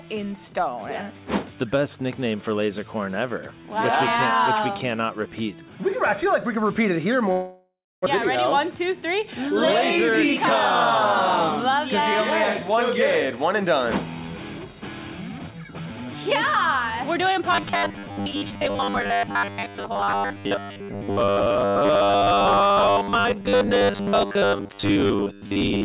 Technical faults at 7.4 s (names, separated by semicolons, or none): long network dropout